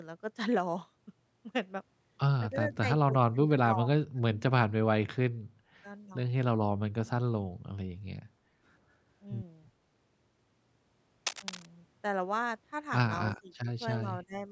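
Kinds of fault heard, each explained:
Speech suppressed in double talk: The speech keeps sinking or breaking up in pieces, with dips of roughly 10 to 30 dB between 2.51 and 5.4 s (2.51, 3.1 to 4.43, 4.67, 5.3 s) and again at 13.29 and 13.96 s to the end. The likely cause is an echo canceller that could not tell the near talker apart from loudspeaker echo during overlapping talk, so it attenuated both together.
Background gated by the echo canceller: From 8.29 to 8.57 s the room sound drops by about 8 dB for roughly 0.3 s, then comes back. This is the canceller clamping the microphone hard while far-end audio played through the loudspeaker, and releasing once it judged the echo gone, so the ambience briefly ducks out.
Cable scratch noise: Between 11.26 and 11.66 s a dense, uneven burst of scratchy, rustling noise sits over the signal at a high level, roughly 5 dB below it. It sounds like a worn cable, connector or control being moved, with its contact resistance fluctuating rapidly; that is the likely source, producing this short crackling patch.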